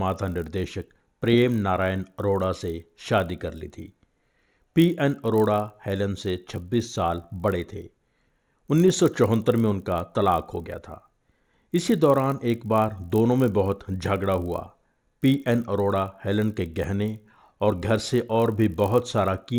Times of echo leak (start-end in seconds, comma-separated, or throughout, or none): none